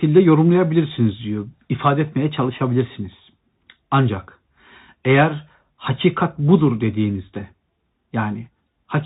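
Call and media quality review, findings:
Bluetooth CVSD headset codec, throughout: plainly audible granular hiss under speech, scratchy s sounds, nothing above 4 kHz. One-bit delta steps fit a 64 kbps link; a plain low-pass would leave no hiss.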